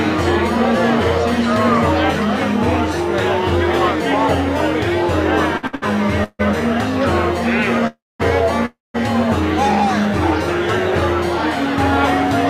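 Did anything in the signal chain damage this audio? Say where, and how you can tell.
Yes, the network stage. Three short stalls from late packets fall at 5.57 to 5.65, 5.67 to 5.75 and 5.75 to 5.84 s. Each holds the sound for 56, 61 and 68 ms, with a slight buzz or dip. The jitter buffer emptied and the receiver stretched the last sound. Nothing is lost.

Call audio freezes follow at 6.24 to 6.41, 7.87 to 8.21 and 8.65 to 8.96 s. A fading buzz or hiss decays to silence lasting about 50, 220 and 190 ms. Playback then resumes where it stopped. Packets were likely held up in transit, draining the buffer.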